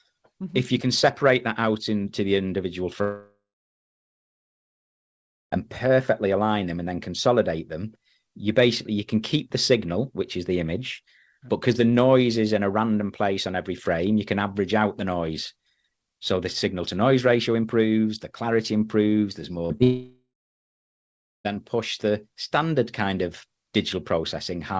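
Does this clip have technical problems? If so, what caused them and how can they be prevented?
Yes. The clip has two kinds of fault: long network dropouts and short concealed packet losses.

Long network dropout, 3.02 to 5.54 s and 19.83 to 21.47 s: the network likely stopped delivering packets for about 2.5 s and then about 1.6 s, so that audio never reached the receiver. In each gap the receiver stretches the last sound into a fading buzz, which then drops to silence for about 2.1 s in the first gap and about 1.2 s in the second. When the sound returns, it picks up further on and the missing stretch is simply gone. Prevention: use a stable wired or strong wireless connection, and keep other traffic on the link from saturating it during calls.

Short concealed packet loss, 19.66 to 19.72 s and 19.78 to 19.81 s: packets covering about 40 ms and then about 20 ms arrived too late, or not at all, for the decoder to use them. 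Each time, the receiver filled the hole by extending the preceding sound and then blended back into the real signal. That leaves two brief smears just before the second dropout, and a short sound falling in either gap can disappear. Prevention: reduce jitter and packet loss on the network path, and enable forward error correction if the call software supports it.

The call ran through a G.722 codec, which is why nothing is heard above 8 kHz.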